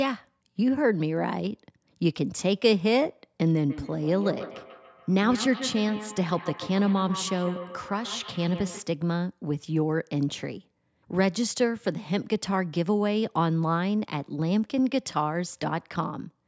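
A speech clip with feedback echo between two devices from 3.7 to 8.97 s: each phrase comes back roughly every 150 ms, peaking about 12 dB below the speech, as one device's speaker feeds a second device's microphone that its own echo canceller can't remove.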